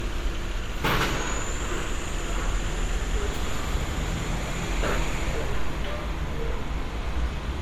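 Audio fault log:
Throughout: generation loss. The sound is swirly, smeared and hollow, with blurred attacks. The likely cause is repeated MP3 encoding, around seven passes at what sounds like 96 kbit/s, each on a shifted frame grid. A single encode at that rate would sound cleaner, and content still reaches 19.9 kHz, so this is not simple band-limiting.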